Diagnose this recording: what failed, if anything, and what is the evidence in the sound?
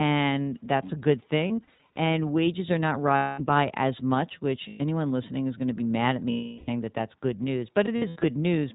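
The codec stage is at fault. Throughout, the speech is capped at 4 kHz and has a rough, slightly synthetic texture, which fits the iLBC codec at about 15 kbps with 20 ms frames. The codec set this ceiling.

The network lost iLBC frames at 1.48–1.98 s (220 ms scattered, runs up to about 70 ms), 3.16–3.41 s, 4.68–4.82 s, 6.30–6.70 s and 7.86–8.25 s. Each gap is a held, buzzy vowel-like sound, not silence, and clean speech returns at once.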